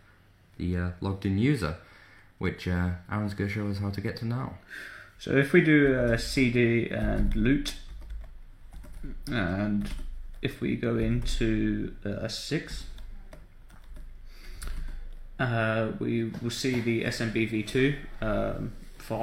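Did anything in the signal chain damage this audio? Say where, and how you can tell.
No, nothing in the chain from capture to playback has left an audible mark on this audio.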